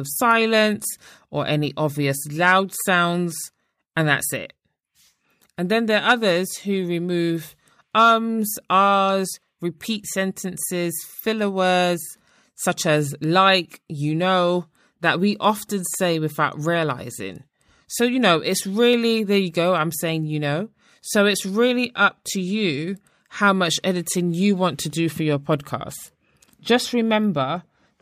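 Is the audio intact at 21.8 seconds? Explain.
Yes, the audio is intact at 21.8 seconds, with no dropout, glitch or distortion at that point.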